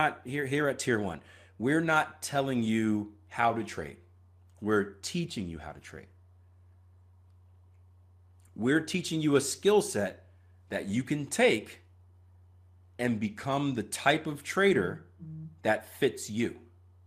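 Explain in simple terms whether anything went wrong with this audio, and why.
Nothing went wrong; the recording has no faults.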